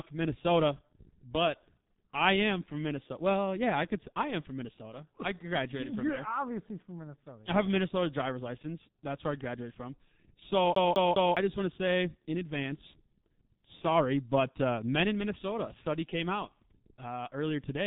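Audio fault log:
Throughout: G.723.1 codec, heavy damage at about 6.3 kbit/s; nothing above 3.8 kHz, so speech sounds muffled and hoarse with smeared consonants.
10.75–11.37 s: CD stuck on one turn; a 205 ms slice replays three times with brief mutes at each jump, giving a fast, even skipping stutter.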